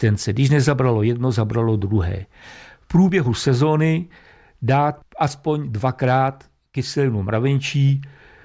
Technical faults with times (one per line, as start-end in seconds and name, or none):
none